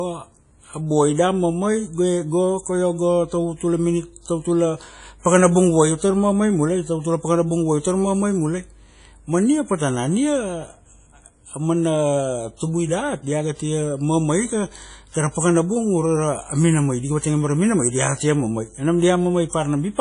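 Throughout, the speech carries plainly audible WMA compression damage, likely from a low bitrate around 32 kbps: ringing, washy smearing, breathing hiss, and nothing above 10.1 kHz.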